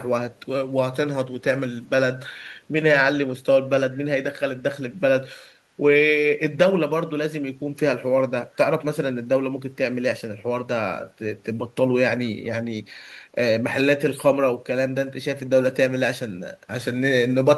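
At 0.35 to 0.41 s a very faint delayed copy of the speech appears, about 40 dB down and 424 ms late, likely an echo leak from a far-end loudspeaker. From 15.65 s to 17.57 s, sample clock jitter of roughly 5 µs adds a rough hiss about 30 dB below the speech, strongest on loud, bright passages.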